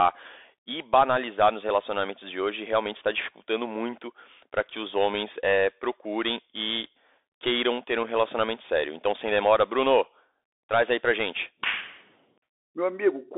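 Across the whole speech clip the Bluetooth CVSD headset codec narrows the sound to roughly 300 Hz–3.6 kHz, with nothing above 3.8 kHz. Unlike a clean telephone band-limit, the one-bit slope coding adds a granular hiss and scratchy, distorted sibilants, consistent with a 64 kbps CVSD link.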